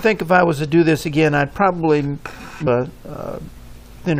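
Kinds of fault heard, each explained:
Damaged data in a compressed stream: at 2.66 s corrupted bytes make the decoder misread frames and hunt for the next valid header, giving a short garbled blip. A spectrogram shows a thin broadband vertical smear; the waveform shows a sharp, irregular burst.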